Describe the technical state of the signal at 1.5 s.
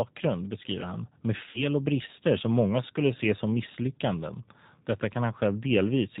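VoIP packet loss concealed by the speech codec runs from 1.49 to 1.63 s, between "beskriver han med" and "och brister som många". The decoder stretches its last pitch and filter into a fading buzzy tone or coloured noise instead of leaving a silent gap, and the sound stays weak after packets return. Underneath, the G.729 codec's 8 kbit/s model makes everything band-limited below 4 kHz and slightly rough throughout, unlike a local glitch.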